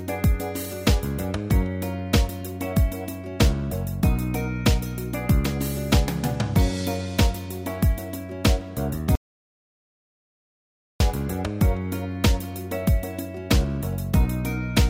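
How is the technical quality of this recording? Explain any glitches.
There's one real glitch: an audio dropout to silence from 9.15 s to 11.00 s. The sound cuts off mid-flow and comes back just as abruptly, and for about 1.85 s there's nothing at all, not even room tone. That points to the input being lost for a moment, likely a dropped connection or a brief mute, while the recorder kept writing blank samples. Whatever happened during that stretch simply isn't there.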